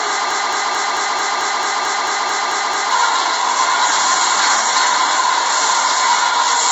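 Throughout, the sound is grainy and rough with nothing above 7.8 kHz, the mark of low-delay AAC compression, likely AAC-ELD at a bitrate around 24 kbps. From 0.31 to 2.91 s, a 0.22 s fragment repeats back to back twelve times, a broken-record loop likely caused by a stalled stream resending its last fragment.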